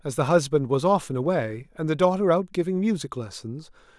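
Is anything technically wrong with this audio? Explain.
No, nothing is technically wrong with this audio.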